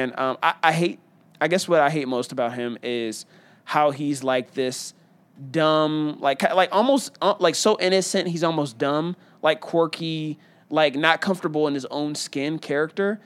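Nothing in the speech recording points to a technical fault: level, continuity and timing all hold steady throughout, with no audible dropouts, distortion or interruptions.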